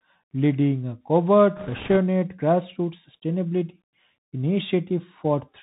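From the start, the speech carries the sound of a Bluetooth CVSD headset codec. The band stops near 4 kHz, so everything sounds thin and boxed in. A fine, granular hiss runs under the speech. The s sounds turn scratchy, and loud bright moments smear, because the one-bit up-or-down steps cannot keep pace with them. That fits a 64 kbps CVSD stream. The damage is plainly audible the whole way through.

From 1.57 to 1.97 s, bit errors on a Bluetooth voice link join in. Flipped bits scramble the codec's step decisions. Each bit carries only a small weight and the errors fade quickly, so there are no sharp clicks. Instead a rushing, crackly noise rides over the speech for about 0.4 s, which points to an error rate of a couple of percent. It then drops back to the codec's steady hiss.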